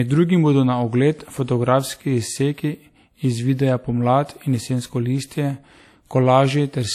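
Speech with no content above 14.9 kHz throughout, and artefacts too coarse for the file's high MP3 bitrate. That mismatch points away from a simple one-pass encode and toward likely low-bitrate audio saved at a high bitrate.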